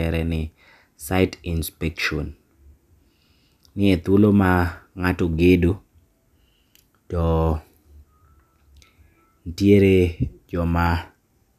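No technical faults are audible anywhere in this speech recording.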